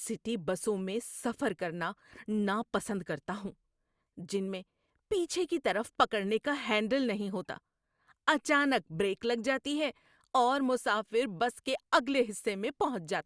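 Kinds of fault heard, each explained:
No faults can be heard in this recording.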